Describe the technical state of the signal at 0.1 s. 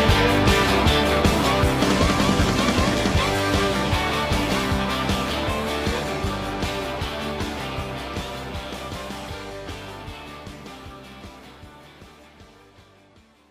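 At 0.1 s the signal is intact, with nothing audibly wrong at that moment.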